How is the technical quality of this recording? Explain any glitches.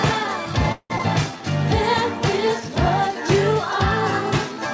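The recording has two glitches close together near the start, both typical of audio that has gone through a call link.

From 0.72 to 0.92 s there's a call audio freeze. The sound doesn't cut off cleanly. The tail of what was playing carries on as a fading buzzy smear, and the last 50 ms or so sink into silence. The likely cause is packets arriving late so the jitter buffer ran dry and the receiver had to improvise. Once the audio resumes it picks up exactly where it left off, so nothing is lost. It's just delayed by about 180 ms.

Right after, at 0.98 to 1.01 s, there's a skip ahead. Playback jumps forward with only a tiny 10 ms join, and roughly a tenth of a second of audio is simply gone. It sounds like a small clipped-out chunk with the two sides stitched almost directly together. That's a stretch of audio being dropped, either on the way or by the jitter buffer, while later audio was already waiting, so playback jumps ahead.

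Throughout, the call path has no content above 8 kHz, which fits a wideband codec like G.722 at 64 kbps.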